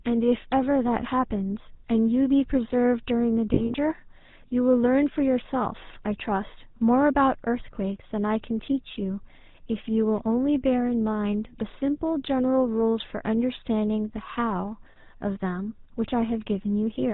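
The whole clip of speech carries the GSM full-rate codec. The damage is plainly audible. Nothing above 4 kHz survives, so the top end is gone. The codec rebuilds the voice from a vocal-tract model driven by a thinned pulse train. That gives the speech a buzzy, gravelly roughness. The sound fits the 13 kbps full-rate mode.

From 3.54 to 3.75 s come lost GSM frames. About 100 ms is missing, scattered over 200 ms. The longest gap is around 40 ms. Each gap is filled by repeating the last good frame. This is heard as brief rough, metallic rings breaking up the speech. A second loss of 40 ms follows at 14.92 to 14.96 s. It is a single short metallic smear.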